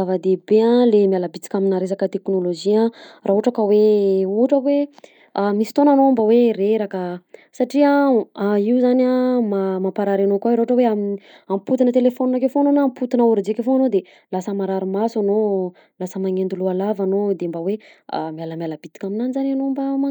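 No technical faults are audible.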